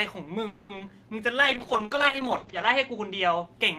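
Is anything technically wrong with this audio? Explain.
Yes, the clip has several call-transmission faults.

From 0.47 to 0.71 s there is a call audio freeze, most likely from packets delayed in transit. The receiver stretched the last sound for about 220 ms as a fading buzz or hiss, then resumed where it stopped, losing nothing. On a spectrogram this shows as smeared, decaying horizontal bands.

At 0.75–0.78 s and again at 0.86–0.89 s, short concealed packet loss occurs. About 20 ms of audio failed to arrive each time, and the decoder patched over it by extrapolating the preceding sound. Each one is heard as a brief smear or wobble, and appears as a small blurred notch in the waveform's envelope.

Between 1.22 and 1.67 s a jitter buffer slow-down repeats pitch periods to rebuild its reserve. This adds about 35 ms, so the sound plays at 93% speed with unchanged pitch. It sounds slightly drawn out, and a spectrogram shows features stretched sideways.

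From 1.43 to 3.51 s a call bitrate drop takes the encoder from 40 to 9 kbps, staying at the lowest rate for about 1.3 s. Audio bandwidth shrinks from 20 kHz to 8 kHz, which sounds muffled and watery. A spectrogram shows everything above 8 kHz abruptly missing.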